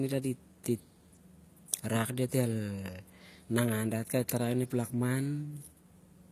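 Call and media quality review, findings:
Sibilants gritty and lispy, treble metallic, throughout; nothing above 14.9 kHz. Likely HE-AAC compression, low bitrate near 24 kbps, band replication rebuilding upper spectrum from lower bands.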